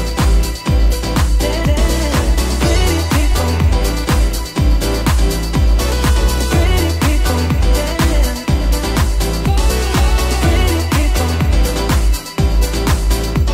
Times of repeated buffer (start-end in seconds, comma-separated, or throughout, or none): none